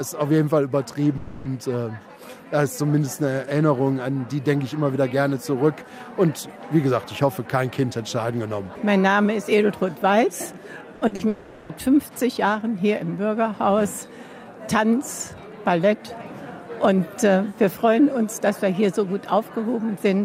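At 1.17 to 1.47 s the sound stops moving forward. The last moment is stretched into a buzz or hiss that fades for about 280 ms, never reaching silence. This is likely a long network dropout. The audio resumes later, with that stretch gone.

At 10.95 to 11.03 s comes a burst of packet loss. About 60 ms never arrived. The receiver held the last sound and turned it down, so it fades away before the audio jumps ahead.

Short concealed packet loss follows twice, at 11.07 to 11.13 s and at 11.15 to 11.21 s. Each time about 40 ms went missing. The gap was patched from the preceding sound and blended back in. Each patch is heard as a quick smear or wobble.

At 11.29 to 11.71 s what is likely a second long network dropout sets in. About 400 ms is filled by a continued, decaying buzz or hiss. The audio then picks up further on, the lost part skipped.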